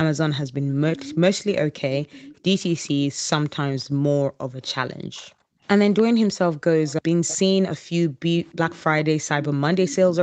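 From 0.44 to 0.79 s the background is gated by the echo canceller: while the loudspeaker plays, the canceller pulls the microphone down by up to about 20 dB, so the room sound dips for roughly 0.4 s and then comes back. On a waveform the noise floor between phrases sinks and recovers. On a spectrogram the background texture fades to a darker band across all frequencies.

From 0.97 to 2.88 s an echo leak appears, likely because the loudspeaker side's echo canceller let part of its microphone pickup through. A copy of the voice that side played returns 296 ms late at about 15 dB below the speech. On a spectrogram it shows as a fainter duplicate of the harmonic pattern shifted right by about 0.3 s.

Gating returns from 2.3 to 5.63 s, deeper this time at up to about 40 dB, with roughly 2 s affected in total. The room sound drops out rather than just dipping, and the waveform's quiet stretches flatten almost to nothing.

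The echo comes back from 5.16 to 7.37 s, overlapping the end of that gated stretch, at the same 296 ms delay and about 20 dB down.

A third gated stretch runs from 7.16 to 8.37 s, again reaching about 40 dB, with roughly 0.7 s affected.

Two shorter echo bursts follow, at 8.46 to 8.83 s (about 20 dB down) and at 9.9 to 9.96 s (about 15 dB down). Both have the same 296 ms offset, which shows as the same lagged ghost trace on a spectrogram.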